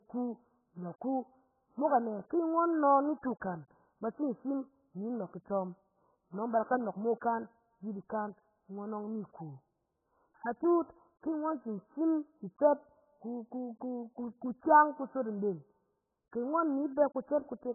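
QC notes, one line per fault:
Throughout, AAC compression: the speech is dull and muffled, with nothing above 1.7 kHz and a smeared, warbling texture. The likely cause is heavy AAC-LC coding at a very low bitrate, consistent with about 8 kbps, which cuts the top band and starves the rest of bits.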